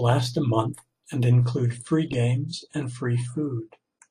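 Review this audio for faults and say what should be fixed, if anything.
From 1.4 s, after "a month and", playback switches to an adaptive stream at a lower bitrate. Treble vanishes above 10.2 kHz. Codec artefacts rise abruptly, with no gap. Prevent it by buffering more or holding a higher minimum bitrate.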